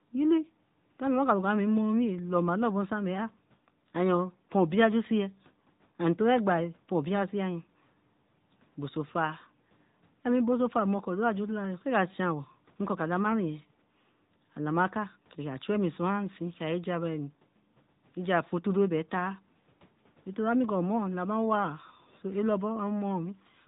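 From start to finish the speech carries the sound of the AMR narrowband mobile codec. Everything above 4 kHz is gone, so the spectrogram shows a hard ceiling across the whole clip. Within that band the voice is rebuilt from a vocal-tract model fed by sparse pulses, giving a plainly audible buzzy, synthetic edge that points to a mid-rate mode near 10 kbps. The room noise, about 40 dB below the speech, sits faintly under it.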